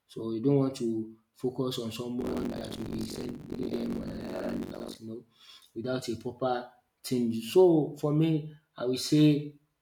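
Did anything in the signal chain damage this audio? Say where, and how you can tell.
Yes, at the driver or buffer stage: buffer tearing from 2.20 to 4.97 s. A rattling, robotic buzz at 46.9 Hz, which fits a 1024-sample buffer, rides the speech. Writer and reader have slipped, so most of each buffer replays audio about a tenth of a second old.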